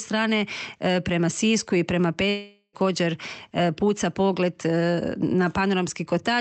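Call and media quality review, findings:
Long network dropout, 2.29–2.75 s. Last sound carried on as a decaying buzz for about 0.44 s, with no true silence. Likely cause: jitter buffer concealment filling lost packets, then audio resuming further on with that span gone. Unlike a short packet-loss glitch, the smeared tone outlasts a few frames. Unlike a mute, nothing drops to silence. Band limit near 8 kHz fits the Opus call path, not this event.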